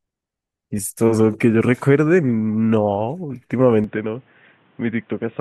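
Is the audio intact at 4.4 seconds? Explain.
No, at 4.4 seconds the speech is inside a stretch that runs from 3.84 s to the end, where the sound has most likely switched to a poorer input device, such as another mic or a headset's call mode. Nothing comes through above 3.8 kHz, so the voice turns dull and boxy. It also drops a few dB and picks up a faint new noise floor well under the speech. The change happens instantly, with no gap at the switch.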